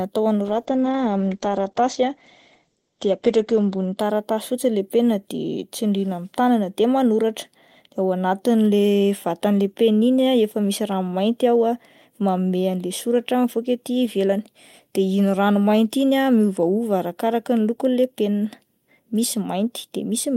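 From 0.44 s to 4.03 s the speech suffers a call bitrate drop. The connection's bandwidth estimate fell, so the encoder had far fewer bits to spend. The sound points to a fall from about 40 kbps to about 11 kbps. At that rate the codec trims the top end, and the audio bandwidth shrinks from 20 kHz to 8 kHz. The lowest rate lasts about 3.5 s. The speech turns muffled and rough, with a watery texture, until the bitrate recovers.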